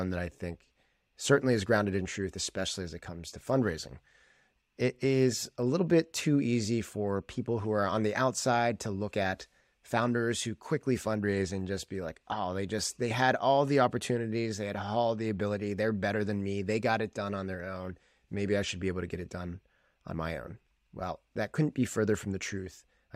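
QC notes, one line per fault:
No fault found in this speech clip.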